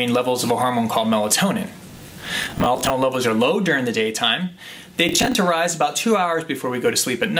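A gritty, tearing crackle rides on the sound from 1.87 to 2.9 s, and a shorter burst follows from 5.09 to 5.35 s. This is processor overload crackle: repeatedly missed deadlines replay stale fragments with hard edges, fitting buffers of around 10 ms.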